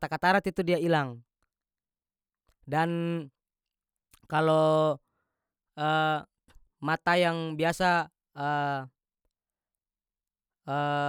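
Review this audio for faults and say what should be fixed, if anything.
No faults found; nothing here needs fixing.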